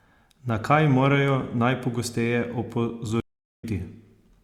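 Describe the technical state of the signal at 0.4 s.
At 0.4 s the speech signal is intact, with no audible dropout, distortion, glitch or other technical fault at that moment.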